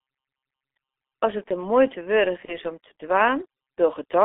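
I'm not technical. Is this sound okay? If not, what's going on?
No, it isn't. Throughout the whole clip you can hear the G.723.1 codec, an early internet-phone system that squeezes speech into very little data. It keeps only a narrow phone-line band, roughly 200 Hz to 3.5 kHz, and updates its picture of the voice only in coarse steps. The damage here is heavy, so the speech sounds muffled, hoarse and boxy, and consonants blur together.

From 2.45 to 2.57 s there is VoIP packet loss concealed by the speech codec. About 30 ms of audio never arrived, which fits one lost chunk of the call. The decoder filled the gap by stretching out the last bit of voice it had, so you hear a brief buzzy or smeared patch. Because each piece builds on the one before, the voice stays weak or distorted for a moment afterward.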